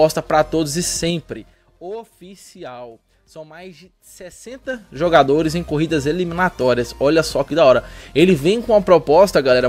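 Zipper noise ticks through the audio from 0.91 to 1.87 s and from 4.35 to 5.15 s. The level falls, then rises, about 20 dB in unsmoothed 3 dB steps.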